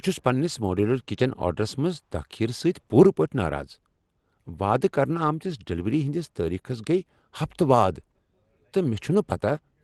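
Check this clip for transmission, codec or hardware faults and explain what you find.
No faults found here.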